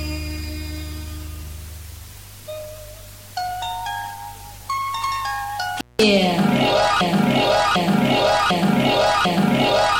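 At 5.77 s an intermittent contact cuts the sound. A loose plug or cable opens for about 184 ms, between 5.77 and 6.03 s. Crackle marks both edges of the gap. Faint hiss remains while the line is open.

From 7.01 s to the end, a broken-record loop takes over. A 0.75 s fragment repeats exactly, back to back, four times. The player, encoder or stream likely stalled and kept resending its last piece. The audio that should have followed is lost.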